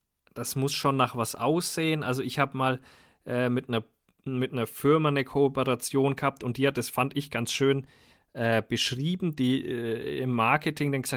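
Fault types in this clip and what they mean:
There are no fault types in this clip.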